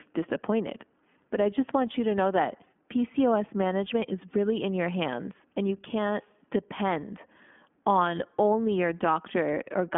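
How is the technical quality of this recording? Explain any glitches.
The speech sounds narrow, slightly rough and synthetic for the whole clip, with nothing above about 3.7 kHz. That is iLBC codec damage: each short frame's excitation is coded independently, which fits the 15.2 kbps, 20 ms mode, on a telephone band of roughly 200 Hz to 3.4 kHz.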